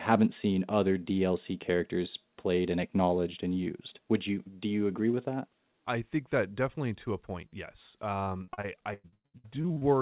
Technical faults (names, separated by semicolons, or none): repeated packet loss (robotic sound)